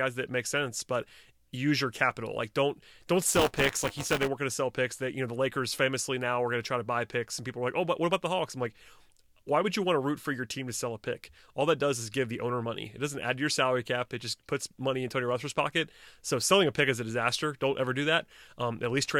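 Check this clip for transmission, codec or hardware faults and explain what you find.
One hardware-side fault is present, lasting about a second.

Buffer tearing runs from 3.28 to 4.28 s. The software filling the playback ring buffer and the hardware draining it have drifted out of step, so their positions cross inside each period. A small slice of every buffer, around a sixth, carries audio from one lap earlier, roughly 15 ms stale, with abrupt seams at both edges. Those seams repeat at 200 Hz, which points to a buffer period of 5 ms. The result is a steady robotic buzz laid over the speech.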